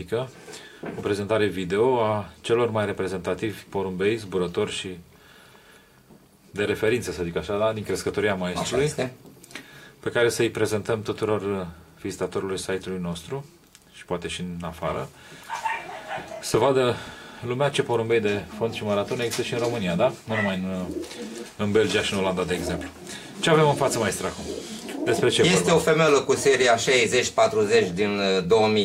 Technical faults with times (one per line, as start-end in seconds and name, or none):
0.22-28.76 clock slip clicks